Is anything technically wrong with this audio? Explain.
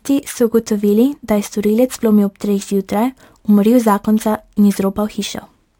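Yes. Throughout the speech there is imaging from sample-and-hold upsampling: each sample was simply repeated with no smoothing filter, which fits a 24 kHz source raised to 48 kHz. A mirrored copy fills 12 to 24 kHz at about 26 dB below the signal, heard as a bright metallic fizz tracking the speech.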